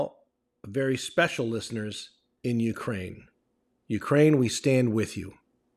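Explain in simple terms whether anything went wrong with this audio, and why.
Nothing went wrong; the speech has no audible faults.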